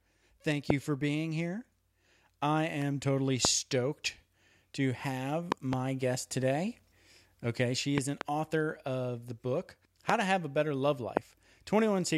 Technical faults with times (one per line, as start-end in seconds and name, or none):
0.70-0.72 loud pop
3.45-3.47 loud pop
5.52-5.75 loud pop
7.98-8.23 loud pop
10.09-10.12 loud pop
11.17-11.19 loud pop